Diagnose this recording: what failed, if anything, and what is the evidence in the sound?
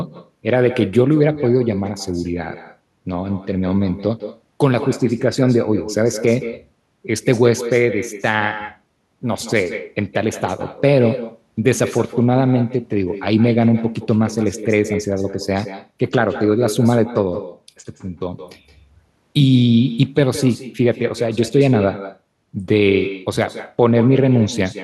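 The failure is echo with no canceller, at the call processing stage. Throughout the speech, every phrase returns as a fainter copy about 13 dB below the original. The copy arrives roughly 150 ms later. It sounds thinner than the direct voice. The far end is playing the call through a loudspeaker. Its microphone picks that playback up. Nothing subtracts it, so the network round trip sends it back.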